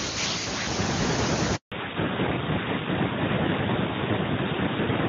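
At 1.56 s, a handover gap opens as the call switches networks and no speech frames arrive. The sound cuts to silence for 160 ms, until 1.72 s. From 1.72 s, a fallback to narrowband replaces the clean HD Voice coding. Everything above 4 kHz disappears, leaving the speech duller and rougher, consistent with a 12.2 kbit/s narrowband codec.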